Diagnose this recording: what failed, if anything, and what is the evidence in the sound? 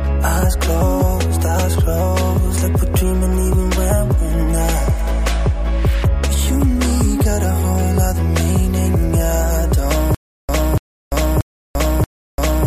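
Playback stage: from about 10.15 s to the end there's a stutter with silent gaps. A 288 ms fragment repeats four times, each followed by 343 ms of dead digital silence, so it cycles every 631 ms. That's likely a stalled stream or player replaying its last buffer on each retry, and the audio for that stretch is lost.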